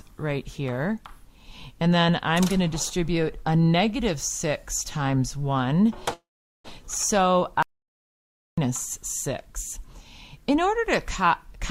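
At 6.13 s a call audio freeze begins and lasts until 6.67 s. The last sound carries on briefly, then fades into about 410 ms of quiet. The likely cause is delayed packets draining the jitter buffer. The audio then resumes where it stopped, roughly half a second late, with nothing lost.

From 7.63 s to 8.58 s there is an audio dropout to silence. The sound cuts off abruptly and returns mid-flow. The gap is silent with no room tone. About 0.95 s of material is gone, likely because the input was lost.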